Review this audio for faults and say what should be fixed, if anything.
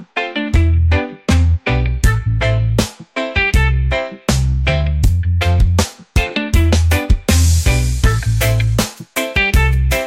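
From 0.0 to 2.0 s the sound turns dull and muffled: de-emphasis applied wrongly. A treble cut intended to reverse pre-emphasis hit material that lacked it, or was applied a second time, tilting the response down to about 8 dB lower at 10 kHz than at 1 kHz. A spectrogram shows the upper bands fading smoothly, with no sharp cutoff. Prevent it by checking the source's emphasis flag before enabling de-emphasis, and applying it only once in the chain.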